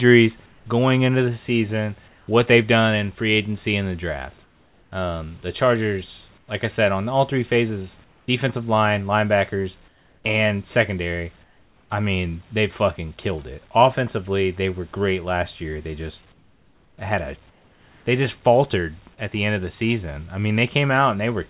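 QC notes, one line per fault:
2.08–2.28, 4.44–4.92, 6.38–6.48, 8.04–8.28, 9.88–10.24, 11.44–11.90, 16.32–16.98 and 17.50–18.06 s, comfort noise in place of the background: in each pause, such as after "going into the season", the room hiss turns smoother and drops by about 3 to 7 dB for 100 to 660 ms, then the real background returns with the next phrase. The likely cause is discontinuous transmission on the call path, which stops sending during silence while the receiver fills the gap with synthetic noise.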